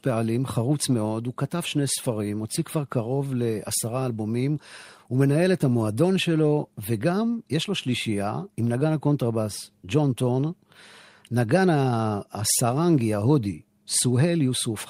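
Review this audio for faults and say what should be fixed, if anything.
No faults were heard; nothing needs fixing.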